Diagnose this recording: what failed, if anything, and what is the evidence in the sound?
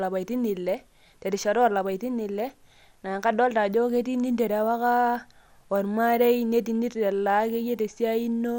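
Codec stage: throughout, nothing above 17.2 kHz and a granular, gurgling texture. This is likely MP2 compression, consistent with around 80 kbps, starving the upper sub-bands of bits.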